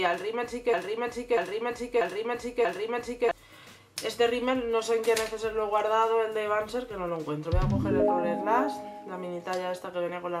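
From 0.74 s to 3.31 s a broken-record loop sets in: one 0.64 s fragment plays four times back to back, identical each pass. The audio due then is lost, likely because playback stalled and kept resending its last fragment. Unlike echo, nothing fades or overlaps.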